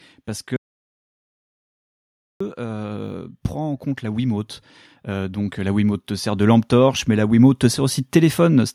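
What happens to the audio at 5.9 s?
At 5.9 s the automatic gain is rising, a swell that runs from 5.04 s to 8.7 s. The gain control has judged the input too quiet and is lifting its level by about 8 dB, so the speech and the background noise grow louder together.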